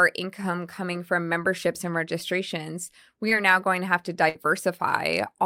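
A short concealed packet loss occurs at 3.29 to 3.33 s. About 20 ms of the speech never arrived, and the receiver covered the gap by carrying the preceding sound forward for roughly 14 ms before blending back in, leaving a brief smear in the speech.

A burst of packet loss follows at 4.29 to 4.37 s. Around 60 ms of consecutive audio went missing. The decoder extended the last sound for about 58 ms while fading it down, then the speech picks up further along with that stretch gone.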